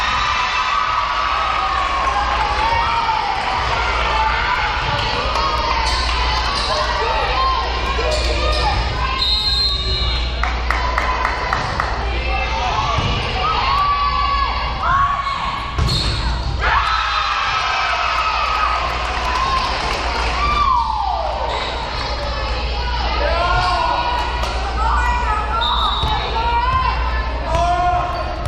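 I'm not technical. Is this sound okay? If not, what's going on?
No. There is a tick roughly once a second, from 0.45 s to 28.13 s, spaced 1.02 s apart. These are periodic USB or driver dropouts: a background task briefly stalls the audio connection, and a tiny sliver of sound is skipped each time.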